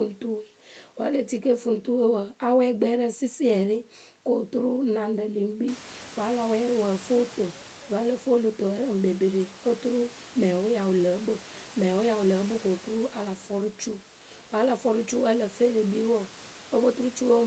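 Nothing here counts as a fault: the call path tops out around 8 kHz as you'd expect, and the room's background noise steps up by about 19 dB at roughly five and a half seconds but still sits about 21 dB below the speech.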